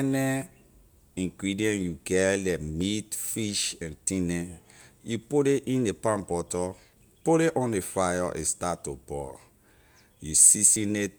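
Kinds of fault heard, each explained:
Audio missing between chunks: skips at 2.81, 6.79 and 10.76 s, 4 s apart, losing about 20 ms each, likely at chunk handovers spliced without silence.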